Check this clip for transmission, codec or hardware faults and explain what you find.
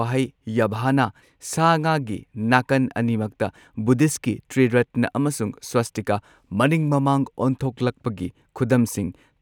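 Nothing in the speech points to a transmission, codec or hardware problem: the signal stays continuous throughout, with no gaps, distortion or sudden changes in character.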